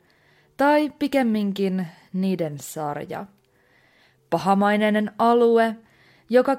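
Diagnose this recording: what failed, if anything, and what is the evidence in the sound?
Nothing in the recording points to a failure at any stage of the chain. No stage, from capture through to playback, leaves audible evidence of a fault in this speech.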